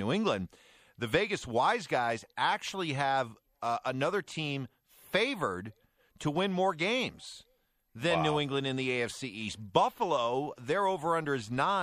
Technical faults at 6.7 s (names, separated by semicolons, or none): MP3 compression